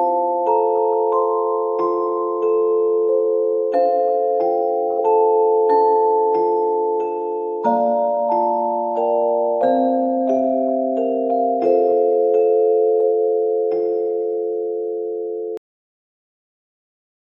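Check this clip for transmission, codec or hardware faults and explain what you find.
One fault shows up, a cut-off end. At 15.57 s the sound stops abruptly mid-event and drops straight to digital silence with no decay, staying silent for the final 1.8 s. The closing buffers were never written or played out, so the audio simply ends.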